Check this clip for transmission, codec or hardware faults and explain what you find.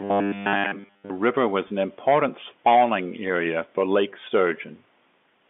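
Two faults stand out in the speech, both early, carried over a G.711 telephone line whose 200 Hz to 3.5 kHz band can be heard throughout.

Robotic sound from repeated short buffers, 0.01 to 1.1 s, ending just before "river was an important". Audio is likely arriving too seldom, so the player loops most of it from a 10 ms buffer. That imposes a fixed 100 Hz buzz, making the speech rigid and metallic.

Packet loss with pitch repetition, 1.68 to 1.70 s, between "river was" and "an important spawning area". About 20 ms went missing, which fits a single lost packet, and the receiver bridged it by repeating the last pitch period. It sounds like a brief, slightly held, buzzy note.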